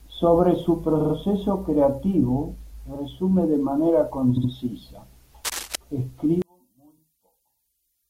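A speech clip with a stutter at 0.99 to 1.13 s, where a short slice of about 46 ms plays three extra times in a row. Just after "de manera", at 4.36 to 4.50 s, a longer slice of about 70 ms plays twice more. These are repeated frames: compressed blocks were written or sent more than once, so the decoder replays them. The block lengths fit two and three codec frames, and each event stretches the audio by about 139 ms.

From 5.44 to 5.76 s a dense, uneven scratching and rustling rides over the speech, roughly ten decibels below it. This cable scratch noise is likely from a worn cable, connector or control being moved, with its contact resistance jumping around rapidly and injecting bursts of noise into the signal for that third of a second.

From 6.42 s to the end, the level of the mono mix falls by about 36 dB and the speech nearly disappears, leaving only a faint remnant. The likely cause is one channel inverted: one stereo channel has reversed polarity, so the nearly identical content in the two channels cancels when they are summed, and only the small difference between them remains audible.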